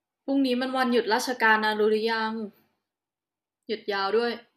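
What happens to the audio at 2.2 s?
Nothing goes wrong at 2.2 s; the speech carries straight through that moment without any dropout, click or distortion.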